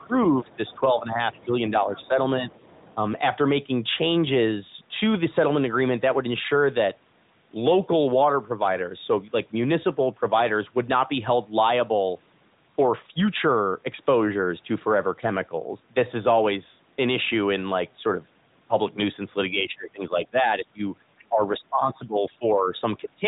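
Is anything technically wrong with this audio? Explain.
Yes, two faults occur at the start of this speech, which is band-limited to about 3.8 kHz by a narrowband mobile path. Other side's voice leaking through, 0.0 to 0.8 s: a faint second voice, roughly 30 dB below the talker, likely loudspeaker echo the canceller left in the microphone signal. Speech suppressed in double talk, 0.07 to 2.49 s: the talker's voice dips by up to about 10 dB in pieces totalling well under a second, likely because the echo canceller could not separate the two sides and turned both down.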